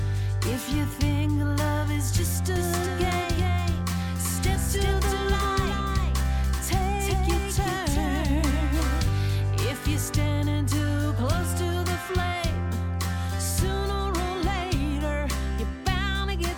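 The audio carries a doubled audio track from 2.56 to 9.02 s: a second, full-band copy trails the original by roughly 0.4 s at about 5 dB lower, with no decay or room colour, and it switches in and out abruptly at both ends. The likely cause is a second capture path or an edit leaving two copies out of step. On a spectrogram every feature reappears shifted right by that fixed offset; the waveform shows each onset followed by a smaller twin.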